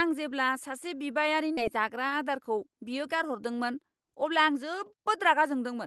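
At 1.57 s the speech jumps abruptly forward, losing roughly 0.7 s: a skip ahead, where queued audio was discarded and both sides were spliced together without a gap. From 1.68 to 3.25 s the speech runs about 7% faster at unchanged pitch, a jitter buffer speed-up trimming short pitch-period pieces, about a tenth of a second in total, to shrink excess delay.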